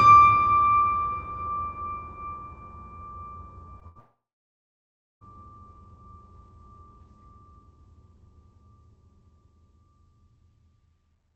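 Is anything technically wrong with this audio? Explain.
Yes. The music breaks up three times in quick succession, all within about 3.8 to 5.2 s. The sound comes through a call path whose high end stops around 8 kHz, which points to a wideband call codec such as Opus.

From 3.79 to 3.83 s there is a brief smear where the music wobbles for an instant. This is short concealed packet loss: about 20 ms never arrived, and the receiver covered it by extending the preceding sound before blending back.

From 3.87 to 3.97 s the music's last sound is held and fades, then resumes slightly further along. This is a burst of packet loss: roughly 80 ms went missing in a row, and the decoder stretched the last sound while turning it down.

From 3.99 to 5.23 s a short fading tail gives way to about a second of silence, and the music returns with roughly 1.2 s gone. A long network dropout is the likely cause, with concealment giving up and muting.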